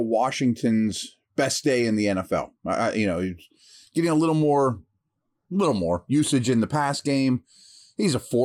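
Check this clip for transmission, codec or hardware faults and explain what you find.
No fault can be heard anywhere in this speech recording. There is nothing in it that calls for an explanation.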